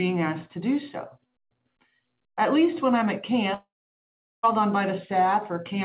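From 3.54 to 4.45 s the audio decays into a fading buzz or hiss, then near silence, and resumes with a section missing, likely a long network dropout.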